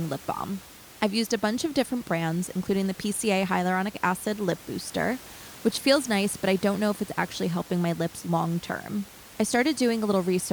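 Nothing goes wrong technically in this speech recording; the only thing you'd notice is a bit of ordinary room noise sitting about 21 dB beneath the speech, which is just part of the space the microphone was in.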